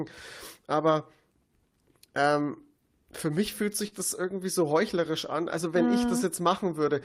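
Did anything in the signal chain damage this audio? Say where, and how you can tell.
Yes, a short concealed packet loss on the network leg, around 3.87 to 4.00 s, between "ähm für mich fühlt" and "irgendwie so heuchlerisch an". About 40 ms arrived too late, so the decoder stretched the previous sound over roughly 42 ms and blended back, leaving a brief smeared wobble.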